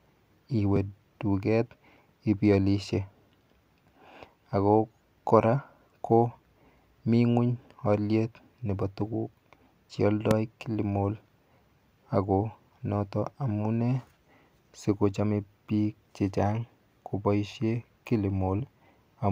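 At 0.76 s and again at 10.31 s, a single loud pop, roughly 15 dB above the speech, punches through, likely a voltage spike from a plug, switch or static, while the talking continues underneath.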